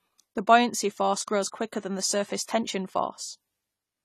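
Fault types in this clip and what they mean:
AAC compression: The speech is audibly damaged by coding throughout, with nothing above 14 kHz, so the top end sounds cut away. This likely comes from AAC-LC encoding at a low bitrate, around 32 kbps, where the encoder lowers its cut-off and coarsely quantises what remains.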